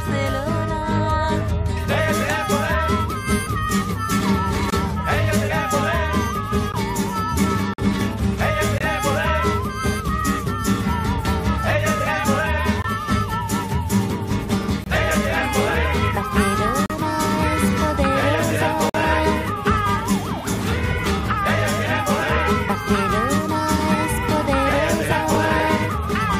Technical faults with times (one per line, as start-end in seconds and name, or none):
4.70-4.72 gap between stream segments
6.72 gap between stream segments
7.74-7.78 gap between stream segments
8.78-8.81 gap between stream segments
12.82-12.84 gap between stream segments
14.84-14.86 gap between stream segments
16.86-16.90 gap between stream segments
18.89-18.94 gap between stream segments
25.10-26.34 periodic USB or driver dropouts